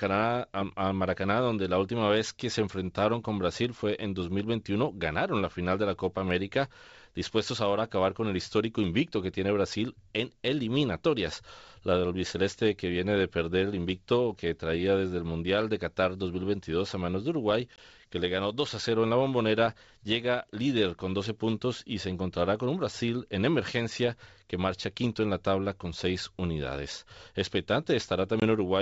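At 17.76 to 17.79 s, just before "que le ganó", and again at 28.40 to 28.43 s, there is packet loss on an ADPCM call. In each case about 20 ms of speech, roughly a single packet, drops out to a hard-edged silence. The decoder's adaptive predictor and step size then no longer match the sender's, so the speech resumes slightly distorted before settling. Between the gaps the G.722 wideband coding at 64 kbit/s stays clear.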